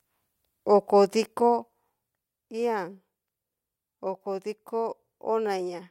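From 1.16 to 2.44 s, the gain drops by roughly 10 dB in unsmoothed steps, around thirty per second, causing zipper noise: a rapid ticking riding on the speech.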